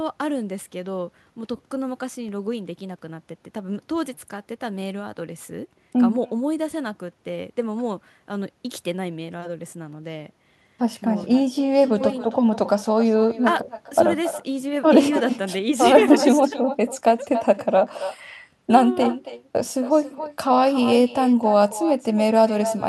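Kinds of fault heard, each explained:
Echo with no canceller, throughout the clip: the far end is playing the call over a loudspeaker, and its microphone feeds that sound straight back with no echo cancellation to remove it. Every phrase of the speech returns after around a third of a second, the round trip through the network. The returning copy sits about 12 dB below the direct speech and sounds thinner.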